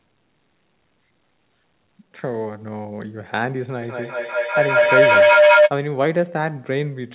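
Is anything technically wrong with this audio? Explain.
Yes, there's a feedback howl from 3.82 to 5.74 s. It sounds like two devices in the same room were on the call, so the mic picked up the loudspeaker and sent it back around, gaining level each pass. The repeats built rather than died away, narrowing to a tone somewhere around 700 Hz that pulses roughly every fifth of a second and peaks about 10 dB above the speech. The sound is narrowband, with nothing above 4 kHz, which fits a G.711 call path.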